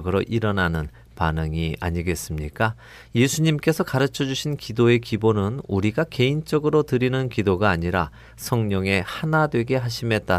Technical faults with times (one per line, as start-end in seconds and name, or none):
none